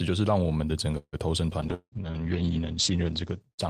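A call audio freeze at 0.97 to 1.16 s interrupts this speech recording: the receiver stretches the last sound into a fading buzz for about 154 ms, followed by about 50 ms of silence, most likely because packets stalled and the jitter buffer ran dry. The speech then resumes exactly where it stopped, with nothing missing, so everything after it plays about 154 ms later. A call bitrate drop begins at 1.65 s and lasts to the end, taking the encoder from 64 kbps down to 9 kbps, with the lowest rate held for just over a second. The audio bandwidth shrinks from 20 kHz to 8 kHz, so the speech turns muffled and coarse, with a rough, watery texture from the much lower coding precision. A skip ahead at 1.67 to 1.71 s drops roughly 70 ms of speech. Playback jumps forward, joined by only a 14 ms fill, and the two sides of the cut butt together almost directly, about 50 ms earlier than before. A long network dropout at 1.74 to 1.95 s is likely a stretch where no packets arrived. 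The last sound carries on as a decaying buzz for about 177 ms before about 50 ms of silence, and the speech returns with about 180 ms permanently lost. A jitter buffer slow-down at 2.02 to 2.19 s repeats short pitch periods to rebuild its reserve. This adds 48 ms and drops playback to 77% speed at unchanged pitch, so the sounds there come out audibly drawn out.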